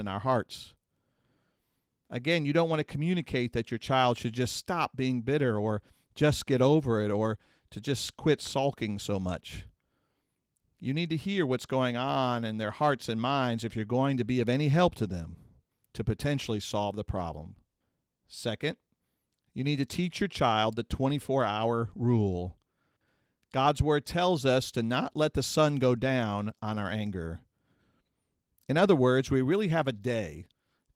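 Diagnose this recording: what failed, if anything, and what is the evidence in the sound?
Nothing failed: the speech shows only the light coding texture expected of Opus voice compression running hybrid and fullband at 24 kbps, and the sound offers no evidence against any stage from wiring through to playback.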